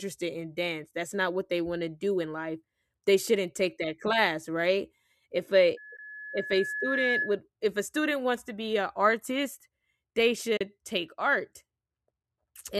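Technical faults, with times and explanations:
5.77 to 7.41 s, loudspeaker feedback squeal: the microphone picks up the loudspeaker it feeds, and the loop gain tops one at 1.7 kHz. That tone reinforces itself, swelling over roughly a second and a half into a squeal about as loud as the speech.
5.97 to 5.99 s and 10.57 to 10.61 s, AAC frame loss with muting: the decoder received nothing for about 20 ms and then 40 ms, which fits two and four lost frames, and zeroed those spectra. Overlapping windows fade the speech out and back in, leaving soft-edged gaps.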